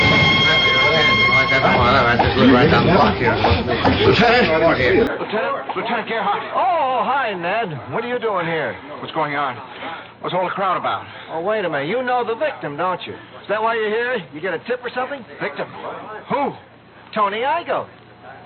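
At 5.07 s the sound abruptly turns dull and boxy, with nothing above 4.1 kHz, a drop of roughly 10 dB and a new noise floor well below the signal, with no gap. The likely cause is an input switched to a poorer device.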